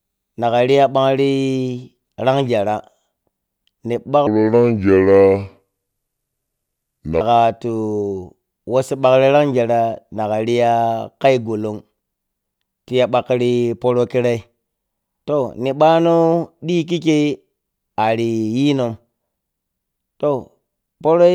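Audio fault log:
4.27–7.21 s: section at the wrong speed. The speech in this stretch of nearly 3 s plays at about 0.70x its recorded rate, so it turns slow and drags, and its pitch falls by roughly seven semitones along with it, because speed and pitch move together when samples are replayed against a mismatched clock. The likely cause is an edit or playback step that timed this section to the wrong clock before normal speed resumes.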